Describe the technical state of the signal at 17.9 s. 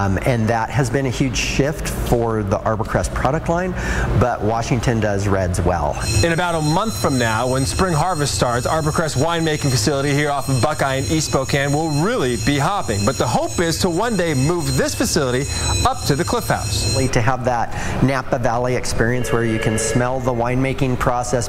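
At 17.9 s the signal is intact, with no audible technical fault at that point.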